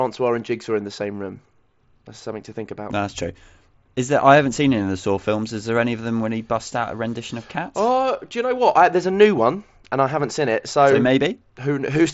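Nothing stood out on listening to this speech, which comes through a Bluetooth mSBC headset link with no content above about 7.7 kHz.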